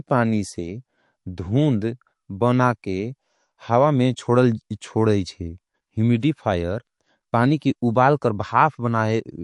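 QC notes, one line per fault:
throughout: MP3 compression. The speech carries a watery, swirling quality, with treble cut off above a fixed point and weak detail flickering in and out between frames. This is likely MP3 coding at a starved rate, which fits around 48 kbps, so the encoder drops high bands and faint components to save bits. Unlike a simple low-pass filter, the loss here shifts moment to moment, giving a smeared, metallic edge on sibilants rather than a steady dullness.
6.20–6.23 s and 7.59–7.62 s (just before "उबाल कर"): pre-echo. Each sharp onset is preceded by a brief hiss, about 30 ms and 25 ms long, rising roughly 15 to 16 dB above the quiet before it. The codec spreads quantisation noise across a block of about 48 ms, and because it never switched to short blocks, noise sized for the attack leaks into the silence ahead. Unlike a click or dropout, the hiss leads into the attack and softens it instead of interrupting it.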